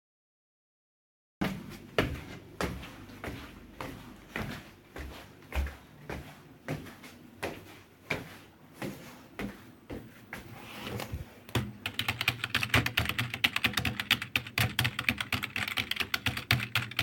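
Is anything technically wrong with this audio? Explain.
Yes, the clip has a cut-off start. The recording or stream began late, so the capture joined a sound that was already underway instead of catching it from its onset. From 0 to 1.41 s there is only digital silence. At 1.41 s the audio switches on abruptly in the middle of a sound, with no natural attack or fade-in. The beginning of that sound is missing, and it enters already underway out of dead silence.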